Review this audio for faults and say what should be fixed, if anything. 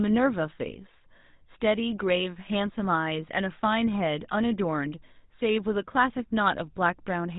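The speech passed through a GSM full-rate codec throughout, with plainly audible damage at a rate that fits 13 kbit/s. Regular-pulse excitation and a 4 kHz ceiling leave it buzzy, gravelly and dull. Prevent it by keeping the chain wideband end to end, avoiding any GSM narrowband hop.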